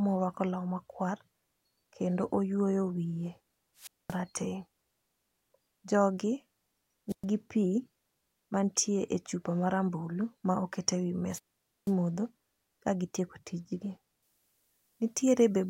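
A speech recording with two kinds of fault. Three wireless microphone squelch dropouts occur at 3.77–4.19 s, 7.09–7.25 s and 11.30–11.93 s. In each, the RF carrier from the analogue FM transmitter weakens, hiss rises briefly, and the receiver's squelch then mutes the output, leaving near-silent holes of about 228 ms, 116 ms and 487 ms respectively before the signal recovers and audio resumes. From 14.23 s to the end, pre-emphasis is left on. The treble boost applied before recording was never undone by the matching de-emphasis, so content around 10 kHz sits about 8 dB above 1 kHz, which fits the CD 50/15 µs curve. That final stretch sounds thin, over-bright and exaggeratedly sibilant compared with the earlier material.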